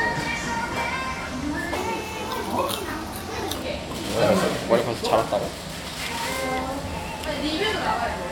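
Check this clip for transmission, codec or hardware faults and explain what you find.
One fault is audible, a section at the wrong speed. From 1.75 to 3.55 s, playback likely ran against a mismatched clock at 1.25 times normal speed, so the sound turns hurried and rises roughly four semitones.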